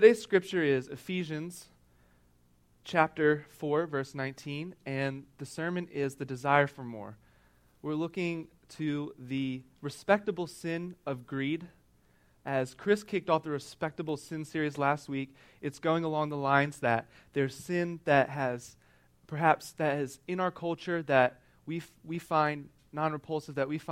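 Clicks recur every 1.61 s from 1.21 to 23.76 s, likely clock drift buffer slips; their strict regularity, unlike random dropouts, reveals two mismatched clocks.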